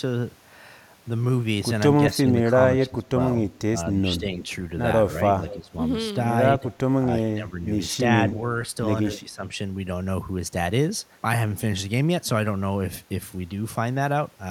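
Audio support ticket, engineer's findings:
Speech suppressed in double talk: voice dips or drops out in pieces at 2.08–3.17, 3.96–4.44, 5.25–5.75, 6.54–6.65, 7.06–7.67, 8.08–8.46 and 9.15–9.45 s, up to about 20 dB deep. Likely the echo canceller ducking near-end during double talk. The waveform shows notched envelope gaps.

Echo leak: faint delayed copy at 5.48–5.56 s, 247 ms behind the voice, about 15 dB down. Likely residual loudspeaker echo passing the canceller. On the spectrogram it is a weak repeat of the preceding harmonics, shifted right.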